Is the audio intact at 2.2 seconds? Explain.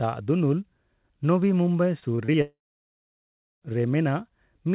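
No, 2.2 s sits inside a burst of repeated packet loss (robotic sound) running from 2.0 to 2.36 s. Four short dropouts, the longest about 24 ms, get papered over by stretching the last bit of audio. About a fifth of that stretch is filled in that way, so it sounds choppy with pieces missing.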